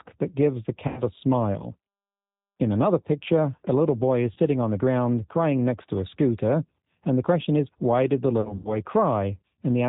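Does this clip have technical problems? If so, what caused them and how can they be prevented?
Yes. The whole clip carries the sound of the G.729 codec at 8 kbit/s, with plainly audible damage. The voice is rebuilt from a vocal tract filter, a pitch predictor and a few pulses per short frame, so it comes out slightly rough and synthetic, with nothing above 4 kHz. Unlike a simple telephone band-pass filter, which only dulls the top end, this adds a gritty, artificial texture to the voice itself. Using a wideband codec at a higher bitrate prevents it.

VoIP packet loss concealed by the speech codec occurs at 0.88 to 1.00 s, about 90 ms of lost audio, which fits three lost packets; at 4.33 to 4.39 s, about 30 ms, fitting a single packet; and at 8.41 to 8.77 s, where about 120 ms is lost in bursts scattered over 240 ms, the longest run 90 ms. A plain dropout would leave silence or a click. Here the decoder extends the last pitch and filter into a buzzy tone or coloured noise that fades, and the voice stays weak for a moment after audio resumes. 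A jitter buffer with forward error correction or redundant packets on a less congested network prevents it.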